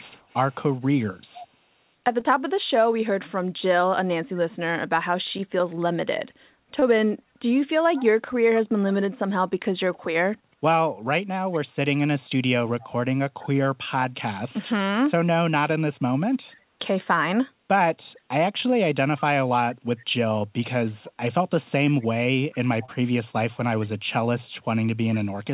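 Echo leak, from 0.00 to 1.48 s: a faint copy of the speech returns about 0.46 s behind the original, roughly 20 dB down. The far side was likely playing the call through a loudspeaker, and its echo canceller let part of the microphone pickup through.

Short concealed packet loss, at 2.20 to 2.24 s and again at 6.80 to 6.84 s: about 20 ms of audio arrived too late to decode. The receiver bridged each gap by extending the preceding sound and then blending back, which leaves a brief smear or wobble.

The echo leak returns in short scraps at 7.96 to 8.04 s (still about 20 dB down), 11.53 to 11.60 s and 12.81 to 12.87 s, and then as a longer stretch from 19.18 to 24.55 s, with the same 0.46 s delay, the last three at a lower level, around 25 dB below the speech. Within that stretch, a third concealed packet loss at 22.86 to 22.90 s adds another short smear. Throughout the clip, the telephone-band codec carries nothing above 4 kHz.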